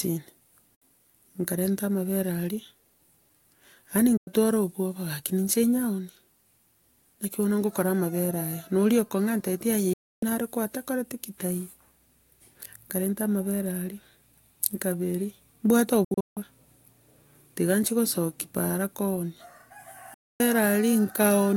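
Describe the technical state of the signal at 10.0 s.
At 10.0 s the speech drops out completely: from 9.93 s to 10.23 s the audio snaps to silence with only a 3 ms fade, then resumes mid-flow after roughly 0.29 s of nothing. This is a digital broadcast dropout. The receiver stopped getting valid data, either losing the signal or rejecting corrupted frames, and muted its output until clean frames arrived again. The length of the gap fits around nine lost frames, and whatever was transmitted in that window is gone.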